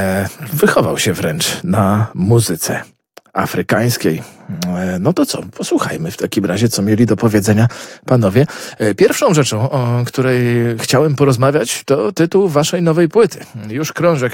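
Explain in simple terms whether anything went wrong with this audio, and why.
Nothing went wrong; I can't hear any problem here.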